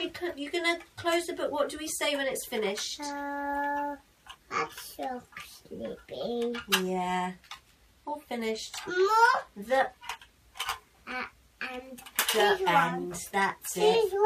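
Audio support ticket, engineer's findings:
Adaptive stream at a lower bitrate, 6.35 to 10.35 s. Player switched down to a low-rate rendition for 4 s, no gap at either switch. Treble abruptly thins and turns synthetic, nothing above 14.9 kHz, with codec artefacts rising. This fits a step from AAC-LC near 96 kbit/s to HE-AAC near 24 kbit/s.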